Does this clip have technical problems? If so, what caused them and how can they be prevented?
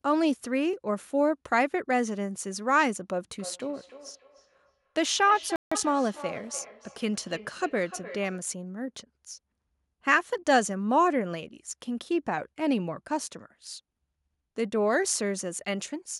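Yes. From 3.34 to 8.51 s there is feedback echo between two devices: speech returns roughly every 0.3 s, at about 15 dB below the original, because a second device replays it into the microphone. A spectrogram shows faint, evenly spaced copies of each syllable. Prevent it by muting the speaker on one device, or by using headphones.

A playback stall cuts the sound out from 5.56 to 5.72 s, likely because the player ran out of data. The waveform shows a flat, silent gap of about 0.16 s. A larger jitter buffer prevents this.

Time-compressed catch-up follows from 5.72 to 5.86 s, with speech running at 2× speed but normal pitch. The waveform looks squeezed and has cross-fade seams. Avoiding the stall removes any need for this catch-up.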